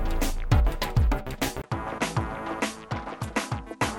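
At 1.62 s the audio drops out for about 20 ms, then continues to the end with nothing above 11.7 kHz, a level roughly 10 dB lower, and a new background noise about 40 dB below the signal. This points to an input switched to a poorer device, likely a change of microphone or headset profile. A plain low-pass filter or codec bandwidth drop would not bring the gap, the level fall and a different noise floor together.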